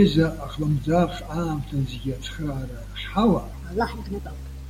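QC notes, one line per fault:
3.54–4.70 s, section at the wrong speed: the final stretch of speech turns suddenly high and hurried, running about 1.34 times too fast and sounding around five semitones sharp, with pitch and tempo rising together, likely because this portion was played back against the wrong clock rate.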